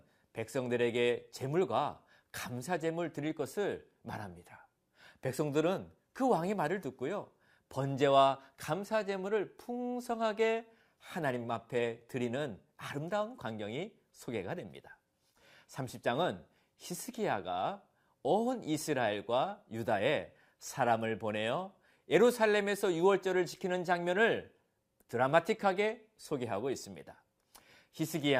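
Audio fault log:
No fault is heard in this speech clip.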